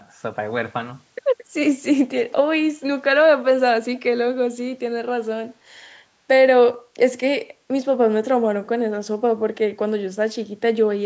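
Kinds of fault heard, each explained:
Echo leak: A far end playing the call on a loudspeaker likely had an echo canceller that let part of its microphone pickup through, so brief, faint copies of the speech return about 222 ms late, roughly 25 to 35 dB below the voice, at 1.4, 2.3 and 3.9 s.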